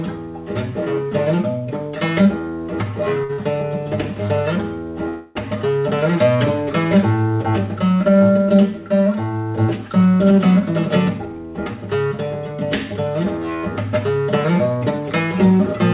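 At 3.24–3.31 s and again at 3.33–3.40 s come two short stalls from a late packet: the jitter buffer ran dry and the receiver held the last sound for about 50 ms each, a brief buzzy hold with nothing lost. From 5.09 to 5.37 s a call audio freeze stretches the sound into a fading buzz for about 267 ms before it resumes where it stopped, likely because packets were held up in transit. At 10.23–10.63 s and 11.09–11.75 s, jitter buffer speed-ups trim small pitch-period pieces to shed excess delay: the audio runs at 108% then 112% speed at the same pitch, dropping about 40 ms and about 100 ms, and sounds hurried. Throughout, nothing is heard above 4 kHz, which fits a G.711 A-law call path at 64 kbps.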